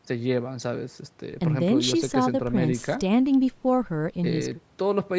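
Nothing stood out on listening to this speech, which has the band limit of call microphone processing with nothing above 8 kHz, as expected for that path.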